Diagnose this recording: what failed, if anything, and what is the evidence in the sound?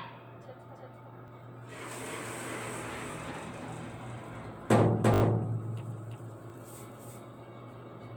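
A second, equally loud copy of the whole sound trails the original by roughly a third of a second, with no decay or room colour. This doubled audio track likely comes from the capture or driver stage recording the signal twice, once through a slower path.

Short stutters occur at 1.28 s, 3.12 s and 6.5 s, each a 20 ms piece played twice with a hard join. A longer one from 5.14 to 5.22 s repeats it four extra times. This repeated buffer is a driver or buffer underrun: no new audio arrived, so the last buffer replayed.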